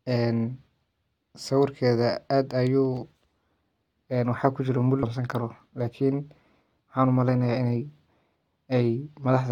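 At 5.02 s the speech jumps abruptly forward, marked by a brief blip at the join, with the continuity of the sentence broken at that point. The likely cause is a stream segment skipped: one chunk of the segmented stream failed to arrive or load, and the player moved straight on to the next chunk, dropping that stretch of programme. The short discontinuity where the two non-adjacent segments meet is what produces the blip.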